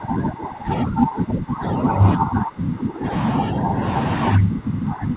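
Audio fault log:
0.00–2.02 s, 2.18–3.12 s and 4.36–5.16 s, speech suppressed in double talk: the speech sinks by up to about 15 dB and turns thin and choppy in places. The likely cause is an echo canceller mistaking simultaneous far-end talk for echo and attenuating the near talker along with it.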